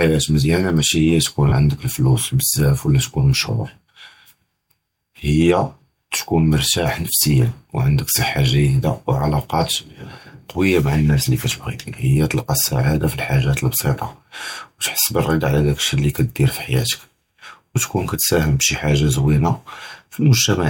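A speech recording with one brief dropout from lost LE Audio frames, at 1.49 to 1.52 s. For about 30 ms, consistent with three missing frames, the decoder refills the gap with the previous spectrum under randomised phase, giving a short noisy smear. A spectrogram shows a blurred, harmonic-free band; the waveform turns noise-like.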